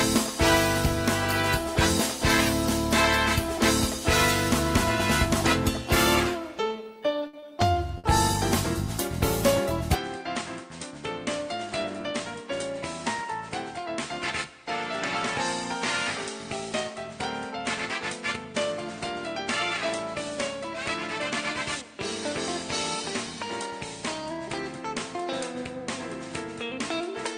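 Two short stalls from late packets sit close together, at 7.27 to 7.48 s and at 7.39 to 7.45 s. In each, the jitter buffer ran dry and the receiver held the last sound, for 60 ms and then 30 ms, before carrying on from the same point, so nothing is skipped but the audio hangs audibly. Just after, at 7.98 to 8.07 s, a burst of packet loss removes 60 ms outright: the receiver extended and faded the preceding sound across the gap, then resumed further along with that stretch gone. From 9.95 s to the end the character changes abruptly. Nothing is present above 9.4 kHz, the level drops by about 10 dB, and a new noise floor appears roughly 45 dB below the signal, with no silence at the transition. This is likely an input switched to a poorer device. At 11.85 to 12.21 s a jitter buffer speed-up trims the backlog by cutting small pitch-period pieces, some 40 ms in total, so the audio runs at 110% speed with unchanged pitch and sounds rushed.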